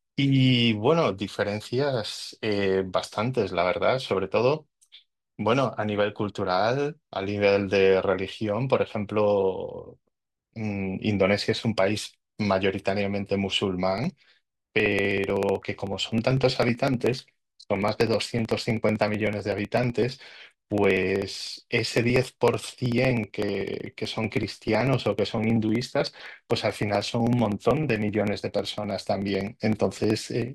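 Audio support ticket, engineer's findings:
Periodic USB or driver dropouts, 13.98 to 30.48 s: ticks every 63 ms, about 1 ms skipped each, likely a background task blocking the USB bus or audio driver.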